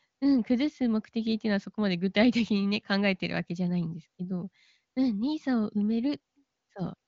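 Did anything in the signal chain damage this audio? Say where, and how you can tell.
No, no stage in the chain has damaged this speech. It has gone through the AMR wideband (HD Voice) codec: the band stops near 7.3 kHz as that codec's range does, and the sound stays clear rather than rough, which points to one of its higher rates.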